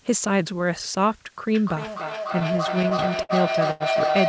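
Throughout, a steady, even hiss sits roughly 30 dB below the speech, which fits low bit depth with dither at 8 bits; unlike plain truncation, there is no gritty distortion tracking the signal. From 1.47 s to the end, a feedback howl builds around 700 Hz, the loop repeating about every 300 ms as it re-enters, and peaks about 1 dB above the speech. Unlike a steady tone, it swells and never decays. Between 2.33 and 3.32 s, repeated stalls (stutter) appear: eleven brief holds, the longest 61 ms and about 151 ms in total, drag the speech without dropping anything. The effect is jerky rather than clipped out. At 3.71 to 3.83 s, a short stall from a late packet holds one sound for about 90 ms, then resumes where it left off. It is a single stretch, not a chain.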